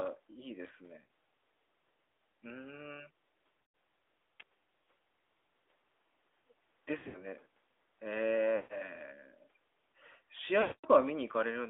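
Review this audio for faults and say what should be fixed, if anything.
The whole clip carries the sound of the AMR narrowband mobile codec. Everything is confined to roughly 300 Hz to 3.6 kHz, and the speech has a buzzy, synthetic edge that fits a mid-rate AMR-NB mode around 10.2 kbps. On a spectrogram, energy stops abruptly at a flat ceiling near 3.6 kHz. To prevent this, carry the call over a wideband codec such as AMR-WB or EVS, or record locally instead of over the phone network.

Lost AMR speech frames occur at 1.04–1.08 s (about 60 ms, fitting three frames), 3.62–3.74 s (120 ms), 6.98–7.26 s (140 ms scattered over 160 ms, longest run 80 ms), 8.56–8.78 s (140 ms) and 10.62–10.87 s (220 ms). At each one, the decoder repeats the last pitch and vocal-tract settings at falling gain, so the sound smears, warbles and fades before returning rough. On a spectrogram these show as frozen horizontal harmonics dimming into a near-gap, and on the waveform as a decaying envelope. 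To prevent this, improve radio coverage or use a link with stronger error protection.

A sharp snap or tight cluster of clicks at 4.40 s is an electrical switching spike, likely from a nearby switch, motor or static discharge arcing into the audio line. On a spectrogram it appears as a thin vertical stripe spanning the whole band, and on the waveform as a narrow spike sitting on top of the audio. To prevent this, shield and reroute audio cabling away from switched electrical loads.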